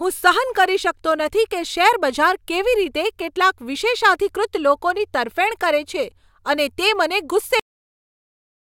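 At 7.60 s the speech is cut off mid-sound, a cut-off end: the final buffers were never written, so playback halts abruptly into digital silence with no decay. The waveform flatlines instantly, and the spectrogram shows energy ending in a sharp vertical edge, then blank to the end.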